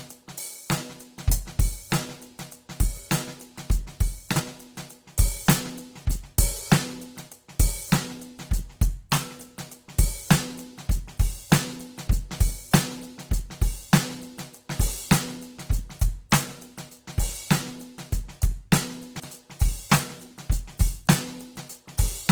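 From start to finish the music carries plainly audible Opus compression, likely at a low rate near 16 kb/s in music (CELT) mode. Starved bands are refilled by folding or noise, so tones sound grainy and rough; a spectrogram shows energy reaching about 20.2 kHz with few holes, but noisy texture.

At 4.32 to 4.40 s and again at 19.16 to 19.24 s, chunks play out of order: a 40 ms chunk arrives one chunk late, after its successor. Each gives a brief jumbled moment, and the waveform shows three hard joins within 80 ms.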